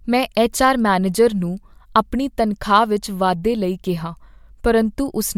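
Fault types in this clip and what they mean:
Nothing wrong turns up in this speech clip; there's just no fault to list here.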